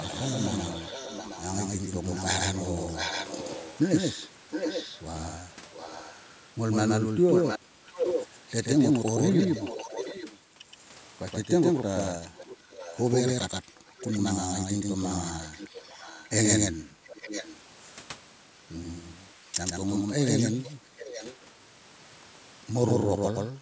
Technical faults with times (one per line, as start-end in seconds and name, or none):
0.00-23.61 doubled audio track
0.03-6.21 echo leak
7.32-10.39 echo leak
12.10-13.02 echo leak
12.28-12.39 background gated by the echo canceller
13.98-17.58 echo leak
20.38-21.48 echo leak